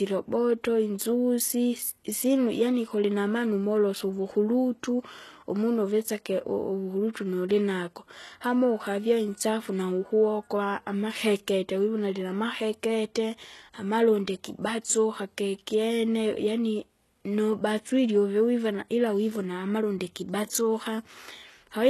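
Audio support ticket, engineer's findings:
Throughout: likely HE-AAC compression at a very low bitrate (fits roughly 16 kbps). Treble rebuilt by band replication, nothing above 12.3 kHz; s sounds gritty, metallic.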